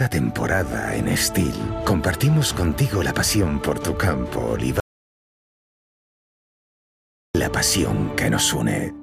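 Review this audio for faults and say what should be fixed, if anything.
An audio dropout to silence runs from 4.80 to 7.35 s, about 2.55 s of silence with abrupt cuts at both edges, likely from the input being lost while the recorder kept writing silence. Unlike a noise gate or fade, it has no ramp and no room tone, and the audio in that stretch is simply gone. Monitor input levels during recording and secure cables, links and mute controls so the signal path cannot drop unnoticed.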